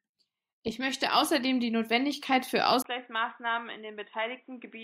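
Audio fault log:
2.82–4.84 s, input switched to a poorer device: after a 20 ms gap, speech loses everything above 3.8 kHz, drops about 10 dB and gains faint new background noise, likely from a narrower-band microphone.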